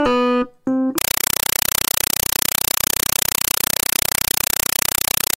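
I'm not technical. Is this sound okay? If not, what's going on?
No. From 0.98 s to the end there is a compressed stream played as audio: a Dolby Digital signal is sent out as ordinary sound instead of being decoded, so you hear harsh, very loud static chattering about 31 times a second.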